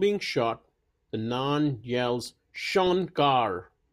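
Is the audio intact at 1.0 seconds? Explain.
Yes, at 1.0 s the speech plays through intact, with no dropout, click, distortion or other fault at that moment.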